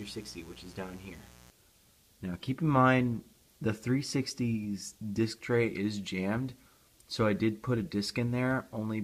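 From the start to 1.5 s there is mains buzz: sharp switching spikes from a dimmer, rectifier or unshielded cable, repeating twice per 60 Hz cycle, add harmonics up into the kilohertz range. The result is a steady, raspy buzz sitting roughly 25 dB under the sound.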